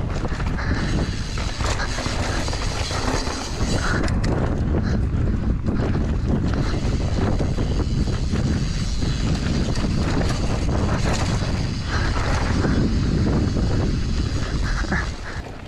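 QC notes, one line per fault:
No faults found on this pass; nothing to log.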